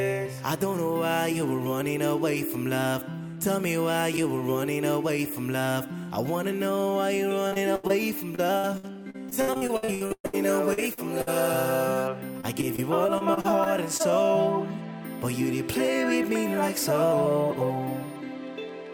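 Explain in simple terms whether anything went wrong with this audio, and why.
Yes, a few things went wrong, all from bits of the audio going missing in transit.

Around 7.47 to 7.91 s, 8.35 to 10.35 s and 12.41 to 14.11 s you get repeated packet loss, which gives a robotic sound. Gaps keep getting patched with the last sound, so it turns choppy with pieces missing.

At 10.73 and 10.93 s there's short concealed packet loss. About 40 ms goes missing each time, and the patch leaves a quick smear or wobble.

At 11.21 to 11.29 s a burst of packet loss fills a slightly longer hole with a held or fading tail before the audio picks up again.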